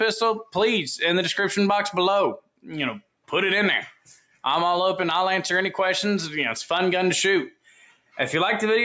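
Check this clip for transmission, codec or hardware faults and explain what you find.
The fault is a speech-tuned noise suppressor left running on non-speech audio, with four points where it cuts the sound hard.

Noise suppressor applied to music or sounds: Throughout, a suppressor built for speech treats steady and sustained parts of the sound as noise. It keeps pulling gain a few decibels up and down, so held material and decays pump and thin while sharper onsets pass.

Sound cut by the noise suppressor: At 2.37–2.67 s, 3.0–3.3 s, 3.92–4.44 s and 7.51–8.18 s, the suppressor misjudges the sound as noise and clamps it. The drops reach about 18 dB (about 16 dB at 3.92 s), so fading or steady sound sinks in level or has its tail chopped short. The longest stretch is near 8 s.

The call's microphone processing is also present, and nothing is heard above 8 kHz.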